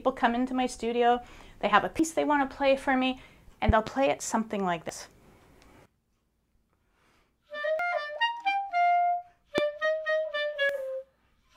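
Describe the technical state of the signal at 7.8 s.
At 7.79 s there is a jump in the audio, most likely from audio missing between chunks: the recording or processing appears to run in blocks of about 3 s, and a short stretch was lost while one block closed and the next opened. Around a tenth of a second of material is gone, and the audio on either side is butted together with no gap, so the sound skips forward abruptly at that point.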